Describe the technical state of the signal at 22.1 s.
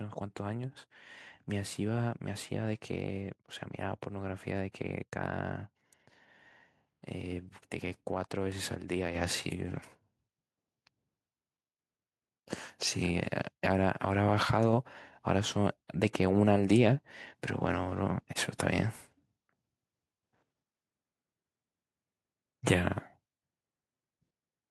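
At 22.1 s the speech signal is intact, with no audible fault at that moment.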